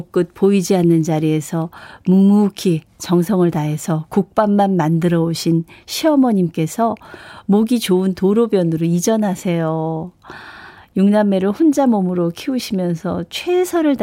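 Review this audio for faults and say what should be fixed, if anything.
Nothing here needs fixing: I listened all the way through this speech recording and didn't catch a single technical fault.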